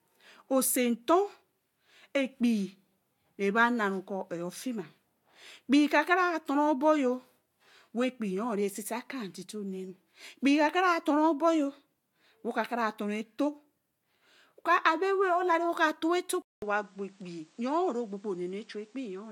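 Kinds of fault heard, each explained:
Input switched to a poorer device: at 16.42 s there's a 200 ms gap, then the speech comes back duller, a few dB quieter, cut off above 9.5 kHz and with a faint new noise floor, most likely the recording hopping over to a lesser microphone.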